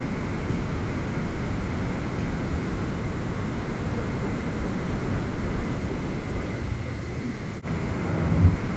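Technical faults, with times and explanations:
2.34 to 3.84 s, 4.14 to 4.81 s and 7.36 to 7.5 s, speech suppressed in double talk: the speech dips by up to about 40 dB, likely because an echo canceller muted the near talker while both sides were speaking.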